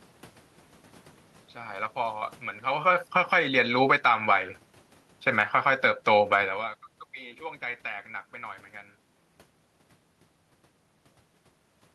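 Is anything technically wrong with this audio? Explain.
Yes. The level is being pumped by automatic gain control in this speech clip, independently of how the talker sounds at the microphone.

Automatic gain falling, 1.96 to 4.27 s: the control judged the input too loud or its background noise too strong and pulled gain down by about 13 dB, so speech and room noise sink together.

Automatic gain rising, 3.4 to 4.69 s and 5.73 to 6.21 s: the control pushes gain back up, by about 6 dB and then about 4 dB. The second rise follows an input drop of about 20 dB, so voice and background swell together. The talker's own movements near 2.5 s and 6.5 s add separate level changes on top.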